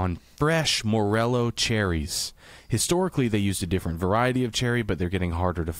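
A short bit of speech, and there's nothing technically wrong to point to here; it all holds together without a hitch.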